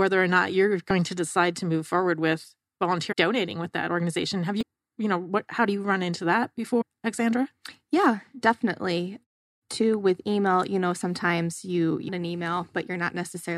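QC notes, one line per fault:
0.90, 3.11–3.13 (after "to move forward with"), 4.61–4.63, 6.80–6.82 and 12.07 s: damaged data in a compressed stream. Five brief glitches of about 20 ms each occur where corrupted frames make the decoder lose sync and skip ahead to the next valid frame header.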